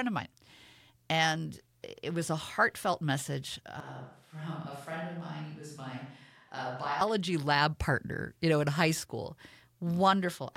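At 3.80 s the speech turns suddenly roomy and hollow, thinner in the bass and roughly 10 dB quieter, with background noise raised to around 35 dB below the speech. This is a switch to a distant microphone, likely after the close microphone's signal dropped out. It snaps back at 7.01 s. The waveform shows a step down in amplitude between those times, and the spectrogram shows weakened low frequencies and a smeared, raised noise floor between words.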